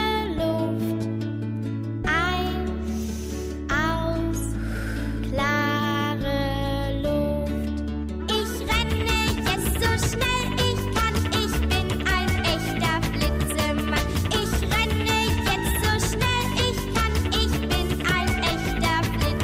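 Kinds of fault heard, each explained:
No faults can be heard anywhere in the audio: the signal stays continuous and steady throughout, with no interruptions, distortion or level disturbances.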